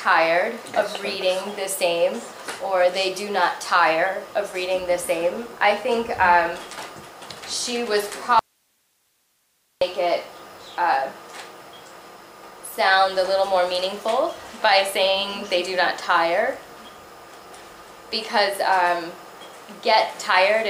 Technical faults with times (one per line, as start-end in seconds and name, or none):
8.39-9.81 audio dropout to a faint residue